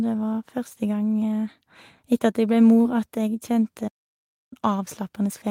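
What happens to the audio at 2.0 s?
Nothing goes wrong at 2.0 s; the speech runs on there without any dropout, click, glitch or other audible fault.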